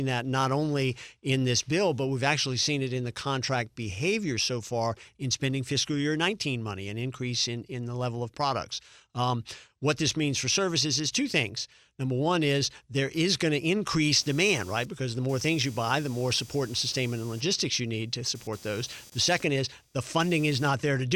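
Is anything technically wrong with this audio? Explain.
Yes. From 14.12 s to 20.69 s there is computer activity noise: processor or peripheral load shifts the shared audio ground, producing a buzzy chirp pulsing around 200 Hz, roughly 25 dB below the speech.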